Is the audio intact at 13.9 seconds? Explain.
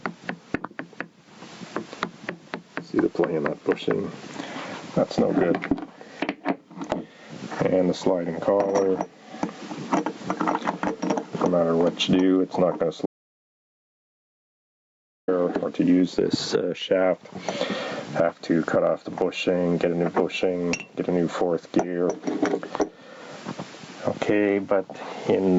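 No. At 13.9 s the audio is gone: an audio dropout to silence runs from 13.06 s to 15.28 s, about 2.2 s. The input was likely lost or muted while recording continued, so the sound cuts off into silence with no room tone. On the waveform this is a flat line, and on the spectrogram a fully blank vertical band.

Gain pumping also runs through the whole clip, including the audio on either side of that gap. The gain was likely set too high, with a fast limiter pulling it down on each loud sound, so the level swings by about 20 dB. The waveform shows a squashed, even envelope.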